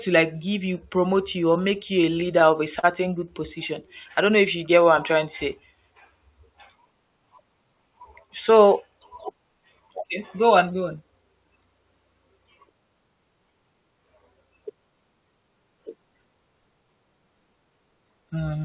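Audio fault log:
1.62–2.85 s, scattered short gaps: Right after "you promote you or", about seven tiny dropouts occur, the longest around 40 ms. The receiver patched each by extending the last sound. Brief ticks and smears result, roughly a tenth of a second concealed in total.
3.83–5.13 s, jitter buffer slow-down: Before "to say", the audio drags to 96% speed at unchanged pitch. The receiver was short of buffered audio. It repeated single pitch periods many times, adding 60 ms, so sounds stretch out.
7.61–8.50 s, jitter buffer speed-up: The audio hurries to 107% speed while pitch stays put. Too much audio had piled up in the buffer. The receiver trimmed short pitch-period pieces repeatedly, removing around 70 ms, so this stretch sounds rushed.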